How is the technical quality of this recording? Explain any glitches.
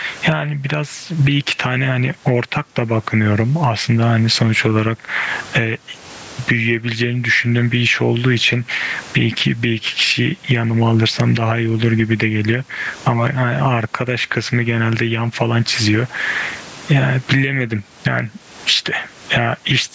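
The recording has a steady fault: gain pumping runs through the whole clip. The gain swings by around 20 dB, and loud and soft parts end up closer in level. The likely cause is input gain set far too high, with a fast limiter clamping down on each loud sound. On a waveform the peaks look squashed to a similar height. On a spectrogram the noise floor brightens between phrases. Nothing appears above 8 kHz, as expected from call microphone processing, and room noise sits about 38 dB below the speech.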